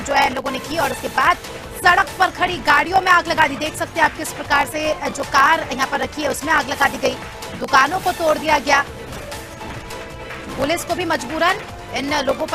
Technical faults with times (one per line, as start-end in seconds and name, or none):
0.00-12.54 block size mismatch (truncated)
0.80 overlap between stream segments
3.37 overlap between stream segments